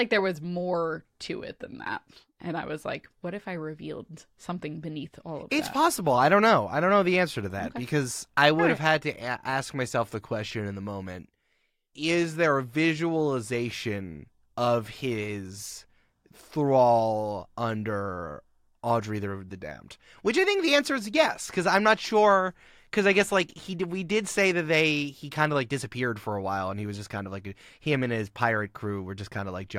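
No technical faults can be heard anywhere in the speech.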